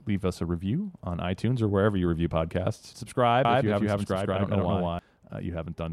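At 3.45 s, just after "wherever you review podcasts", a doubled audio track appears: a second full-band copy trails the original by roughly a fifth of a second at about equal level, with no decay, until it cuts off abruptly at 4.99 s. Likely cause is the signal being captured again through a slower path.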